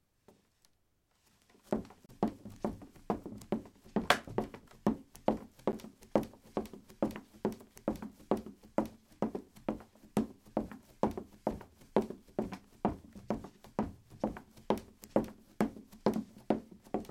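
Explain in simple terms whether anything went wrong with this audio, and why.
Two brief dropouts can be heard, each a block of digital silence. At 2.06 s the sound vanishes for about 30 ms, until 2.09 s, leaving a short hole. At 5.72 s it drops out for only 10 ms, which comes across more as a tick. In both places the sound was replaced by silence. The sound cuts off and returns with no fade. Most likely the program did not fill its output buffer in time.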